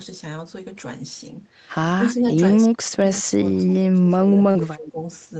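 Speech suppressed in double talk, from 1.97 to 2.24 s, from 2.67 to 3.05 s, and from 3.21 to 4.99 s: the level drops by around 15 dB, then around 30 dB, then around 20 dB across roughly a second and a half. The likely cause is an echo canceller that could not tell the near talker from loudspeaker echo while both sides spoke, so it turned everything down and left the speech dipping and broken.

Echo leak, at 3.15 to 3.2 s: a faint scrap of the speech comes back about 202 ms late and some 30 dB below the main level. This is likely residual loudspeaker pickup that the loudspeaker side's canceller failed to remove and returned down the line.

Short concealed packet loss, at 4.51 to 4.58 s: about 40 ms of audio never arrived in time, and the decoder covered 34 ms of it by extending the preceding sound before blending back, heard as a brief smear inside the already suppressed stretch.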